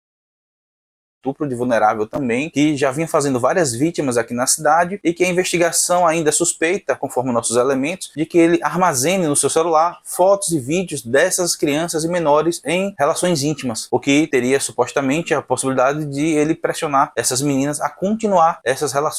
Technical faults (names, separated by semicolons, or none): none